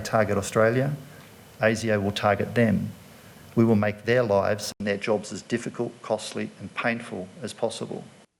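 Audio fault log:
4.72 to 8.39 s, input switched to a poorer device: after a gap of 80 ms the sound turns duller and about 5 dB quieter, with a new, faint noise floor roughly 55 dB below the signal. This is likely a change to a second, narrower-band input, which passes nothing above 11.4 kHz. On a spectrogram the upper band ends in a hard horizontal edge from 4.72 s onward, after a short blank column. The waveform shows a brief flat gap, then a lower envelope.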